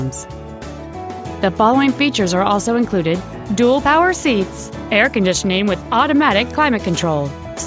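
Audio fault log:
No faults heard; the call microphone processing sounds normal.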